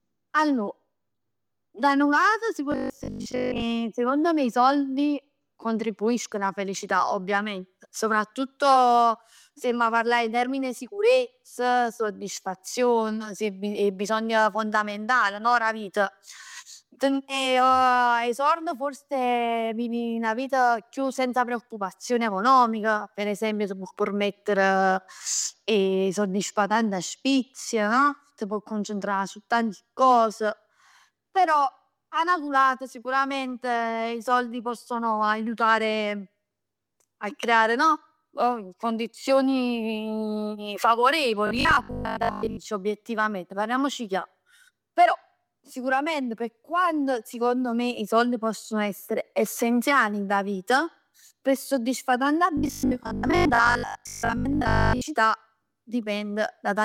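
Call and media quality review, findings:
Robotic sound from repeated short buffers at 2.72–3.64 s, 41.47–42.67 s (just before "obiettivamente parliamoci chiaro") and 52.57–55.05 s (after "vita pe soddisfà tanta"): metallic 50 Hz buzz. Likely jitter-buffer underrun, repeating 20 ms frames over roughly half to 70% of each span.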